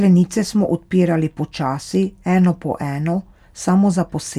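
No technical faults are audible.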